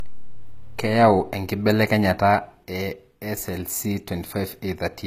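Speech runs for the whole clip with nothing above about 14.9 kHz and the smeared, band-limited texture of a heavily compressed earlier encoding. This is likely low-bitrate audio saved at a high bitrate: a low-rate source, consistent with 24 kbit/s HE-AAC, re-encoded as high-rate MP3, which cannot restore the removed detail.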